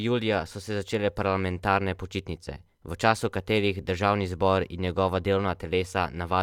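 No technical faults can be heard anywhere in the speech recording. Nothing in the audio calls for a time mark or a closer look.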